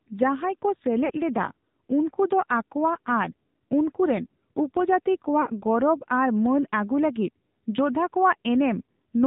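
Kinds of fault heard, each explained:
AMR narrowband mobile codec: the speech has passed through the 2G/3G mobile codec, which fits a rate near 7.4 kbps. Nothing above 4 kHz survives, and rebuilding the voice from a vocal-tract model and a few pulses per subframe leaves it plainly buzzy and synthetic throughout.
Lost AMR speech frames: at 1.06 to 1.11 s and 5.42 to 5.48 s, about 40 ms of speech, likely two frames each time, failed and was concealed. The decoder repeated the last good pitch and vocal-tract settings at falling gain, so each gap sounds like a brief dip or warble.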